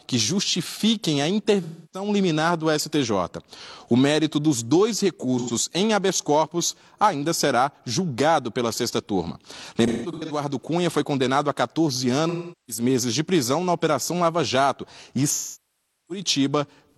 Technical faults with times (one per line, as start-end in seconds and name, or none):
1.63-2.08 AAC frame loss with concealment
5.38-5.51 AAC frame loss with concealment
9.86-10.40 AAC frame loss with concealment
12.29-12.83 AAC frame loss with concealment
15.31-16.23 AAC frame loss with concealment